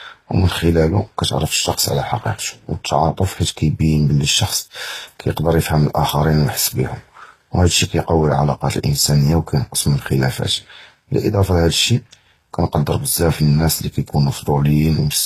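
From start to finish the speech carries two layers of coding damage at once, the artefacts of two different codecs heard together. This points to transcoding between lossy codecs, likely a Vorbis encode near 37 kbit/s followed by HE-AAC at about 24 kbit/s, the second coder wasting bits on the first one's artefacts. A spectrogram shows a hard ceiling at 14.9 kHz with blotchy, patchy energy just beneath it.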